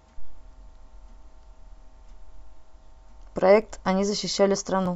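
Clock drift buffer slips appear from 1.13 s to 4.86 s as about four regular clicks, one every 1.24 s. The likely cause is two devices on independent clocks mismatched by around 500 ppm, so the buffer periodically drops or repeats a few tens of speech samples.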